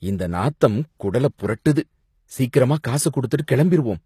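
From start to finish the speech carries HE-AAC compression damage, and it is plainly audible. The likely cause is a low-bitrate HE-AAC encode, and the damage fits something around 24 kbps. Only the lower spectrum is truly coded. The treble is rebuilt by copying lower bands upward under a coarse envelope. Its harmonics no longer match the real ones. S sounds turn gritty and lispy. Nothing remains above 14.9 kHz.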